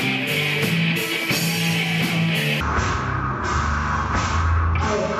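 From 2.61 s the sound drops to half speed and an octave low, a stereo read as mono fault; unlike a sample-rate mismatch, a faint mirrored image appears in the upper spectrum.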